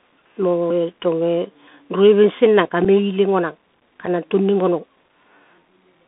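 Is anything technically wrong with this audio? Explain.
Yes, three problems can be heard.

Bluetooth CVSD headset codec, throughout: the whole clip carries the sound of a narrowband headset link. The band runs only from about 200 Hz to 3.6 kHz, which fits a 64 kbit/s CVSD stream. CVSD sends one up-or-down bit per sample with an adapting step size, so fast, loud high-frequency movement outruns the step. The damage is plainly audible: s sounds come out scratchy, and a granular hiss sits under the speech.

Audio missing between chunks, at 0.70, 1.68, 2.65 and 4.60 s: the speech jumps forward at each point, with about 30 ms gone and the two sides butted together with no silence between them. The skips fall at almost one-second spacing. That regularity likely points to a recorder or processor handling audio in one-second blocks and dropping a little each time it closes one block and opens the next.

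Unconcealed Bluetooth headset packet loss, at 2.85 and 4.06 s: each event is a brief 7.5 ms hole with abrupt edges, consistent with a single voice packet lost between headset and phone. No concealment was applied, so silence or an idle pattern replaced the missing audio. The result is a short, sharp dropout in the speech rather than a smoothed-over gap.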